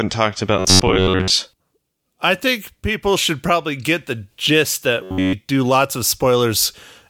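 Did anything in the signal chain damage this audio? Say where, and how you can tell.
Yes, robotic sound from repeated short buffers at 0.59–1.31 s and 5.03–5.33 s (ending before "do lots of"). A rigid 93.8 Hz buzz likely comes from a starved driver buffer looping about 10.7 ms chunks. This shows as evenly spaced harmonic lines on a spectrogram and identical repeating cycles in the waveform.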